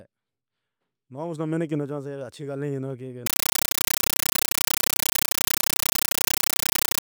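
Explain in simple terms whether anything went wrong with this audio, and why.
From 3.26 s to the end, the speech gives way to loud, harsh chattering static: 9 ms bursts repeating about 31 times a second. This is a compressed stream played as audio. A Dolby Digital signal was played as plain sound without being decoded.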